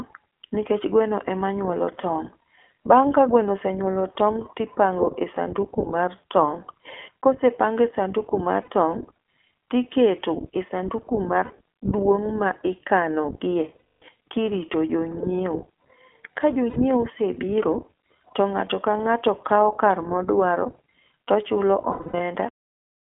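The speech passes through the iLBC codec for the whole clip. Energy is confined to a 250 Hz to 3.4 kHz line band, so a spectrogram shows an empty region above 3.4 kHz. The excitation coding gives a plainly rough, synthetic edge, which fits the 20 ms, 15.2 kbps mode.

Lost iLBC frames produce gaps of about 60 ms at 8.62, 11.44 and 16.70 s, and a longer 240 ms loss from 13.78 to 14.02 s. The decoder fills each gap by repeating the last pitch cycle with added noise. The result sounds like a held, buzzy vowel, and the longer gap fades as it goes. A spectrogram shows frozen, smeared harmonics in these spans, and normal detail returns immediately afterwards. From 21.92 to 22.20 s, shorter losses are scattered across about 280 ms, with the longest run around 70 ms.

The file has a cut-off end at 22.49 s, where the sound stops mid-sound. The waveform drops straight to flat digital silence with no decay.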